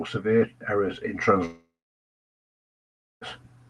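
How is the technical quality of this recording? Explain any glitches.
The recording has one serious glitch: a long gap in the speech. Throughout, the sound has the coding texture of a call path, and its high frequencies stop near 12 kHz, which fits an Opus codec. From 1.45 s to 3.28 s, right after "severe errors in", the speech cuts out, likely from a long network dropout. The receiver stretches the last sound into a short buzz that fades, followed by about 1.5 s of near-silence before the speech resumes with that stretch missing. On a spectrogram this shows as a smeared band that fades into a blank region, and the waveform is nearly flat.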